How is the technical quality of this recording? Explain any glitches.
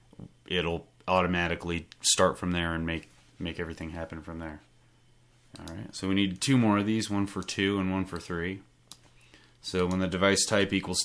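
The recording has no technical glitches to explain. Nothing in the audio stands out as a problem at any point.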